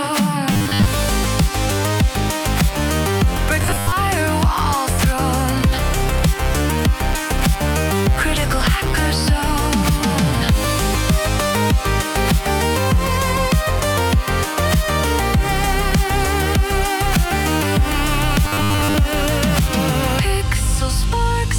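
Robotic sound from repeated short buffers shows up at 0.53–0.87 s, 3.62–3.94 s and 18.45–18.94 s: a rigid 100 Hz buzz, likely from the playback looping about 10 ms chunks when fresh audio arrives late, replacing most of each stretch (roughly half in the second).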